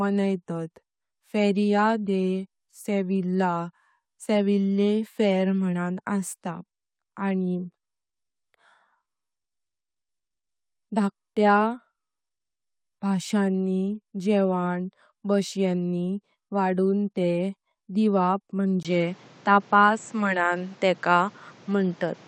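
From 18.83 s, after a 20 ms gap, speech goes dull with nothing above 8 kHz and faint new background noise, likely from the input switching to a poorer device.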